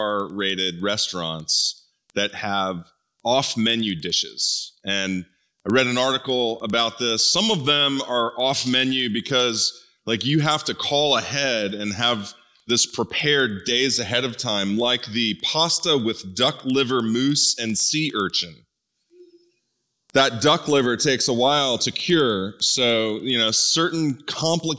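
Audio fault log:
throughout, resampler restarted on every block: a regular tick repeats 10 times a second, once at each 100 ms block boundary, and is present only while there is signal. Each block was converted on its own, so the converter's filter at every edge was fed silence or the wrong end of the block instead of the real neighbouring samples. That leaves a small error at every seam, which fits a 48 kHz to 16 kHz conversion done block by block.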